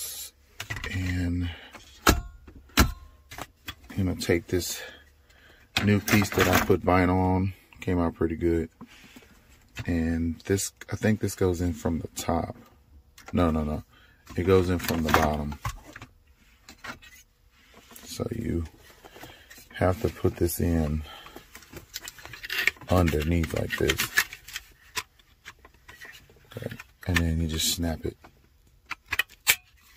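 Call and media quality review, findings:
Nothing stood out on listening; no faults to log for this clip.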